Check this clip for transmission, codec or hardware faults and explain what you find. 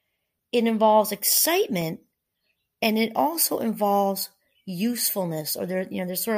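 There's one fault here, a single block of digital silence in the speech at 1.81 s. For about 1.45 ms the signal drops straight to silence and jumps back with no fade, which fits a 64-sample block going out empty, most likely because the output buffer wasn't filled in time. The gap is far too short to hear as a hole, so what you get is a tick from the two hard edges sitting right next to each other.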